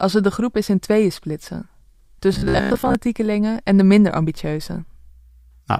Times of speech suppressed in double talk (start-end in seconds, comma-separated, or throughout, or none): none